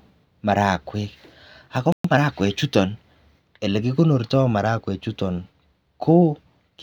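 At 1.92 s the speech halts mid-flow and the output falls silent for 120 ms until 2.04 s, a playback stall, likely from the player running out of buffered data or its thread being blocked.

From 2.04 to 2.28 s the player works off that backlog with time-compressed catch-up, trimming and cross-fading tiny slices so the speech runs at about 1.5 times normal speed. The pitch stays natural, which separates it from a simple faster playback that would raise the pitch.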